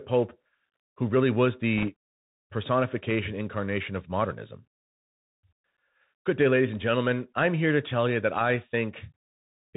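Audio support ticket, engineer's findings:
Narrowband, muffled sound with a granular hiss under the speech. Sibilants scratchy, loud high-frequency bursts gritty and smeared. Nothing above 4 kHz throughout. Probable component: Bluetooth CVSD headset codec, with plainly audible damage. The codec sends one bit per sample, each stepping the waveform up or down by an adaptive amount. Fast, loud high content outruns the step size and distorts, and the constant stepping leaves the hiss. The sound fits a 64 kbps CVSD link.

Short rushing, crackly burst at 1.78 to 1.89 s, about 0.11 s long. No hard clicks or pops, just a brief grainy roughening over the speech. Probable component: bit errors on a Bluetooth voice link. The sound points to an error rate of around 1.5 percent on the CVSD stream. Each flipped bit only moves one step, and the decoder recovers quickly, so errors come through as spread-out noise rather than loud transients.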